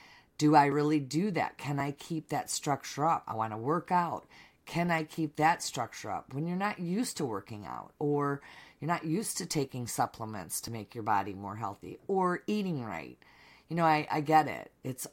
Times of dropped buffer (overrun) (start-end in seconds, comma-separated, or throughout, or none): 0.72, 1.80, 10.68